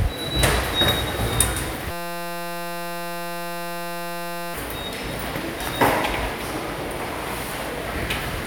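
From 1.91 to 4.54 s, a system hang loop: the system froze while hardware kept replaying one 5.8 ms buffer, producing a steady 172 Hz buzz.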